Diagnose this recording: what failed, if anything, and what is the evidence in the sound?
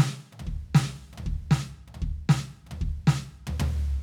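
Nothing failed; the music shows no audible fault.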